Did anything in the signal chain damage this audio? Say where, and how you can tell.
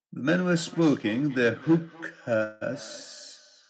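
Yes. The damage comes from the call setup. There is a feedback echo between two devices from 0.56 s to the end of the clip. The speech returns at a steady interval of about 0.3 s. Each pass is thinner and more ringing than the last, with the loudest about 21 dB below the direct speech. A second device in the room is replaying the call, and its sound leaks back into the microphone. The local echo canceller cannot remove audio it did not play itself.

There is also a call audio freeze from 2.43 to 2.63 s. For about 177 ms the sound does not move on. A fading continuation of the last sound fills the gap. Then the speech resumes from exactly where it stopped, with nothing lost. The timing is shifted later by the same 177 ms. This points to the network stage. Packets were likely held up in transit, so the jitter buffer ran dry and the receiver stretched the last sound until they arrived.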